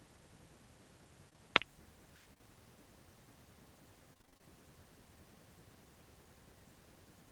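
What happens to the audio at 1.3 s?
Short concealed packet loss happens twice, from 1.29 to 1.38 s and from 1.33 to 1.36 s. Each time, 20 ms of speech arrived too late. The decoder stretched the preceding sound over the gap, then blended back. This leaves a brief smear.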